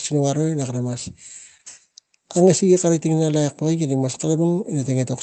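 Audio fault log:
throughout, clock drift between sender and receiver: The sound carries small, unevenly spaced timing hiccups from start to end, with a faintly dragging pace. The sender's clock runs about 3% slow against the receiver's, so the jitter buffer keeps draining and must be topped up.
0.45–4.93 s, repeated timing corrections: This stretch plays at 97% speed. The receiver keeps repeating short fragments, all in the same direction but unevenly spaced, adding roughly 150 ms overall to stay in step with the slow sender.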